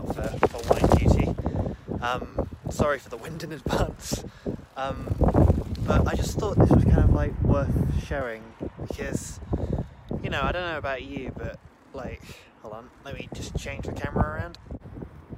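No dropouts, glitches, distortion or level problems can be heard anywhere in the audio.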